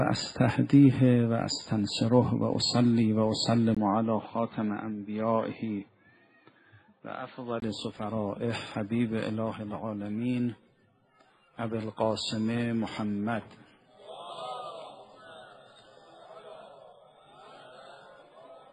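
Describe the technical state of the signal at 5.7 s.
Input switched to a poorer device from 3.75 to 7.62 s: likely a change of input, leaving the sound dull, with nothing above 4.4 kHz, somewhat quieter, after a 20 ms gap.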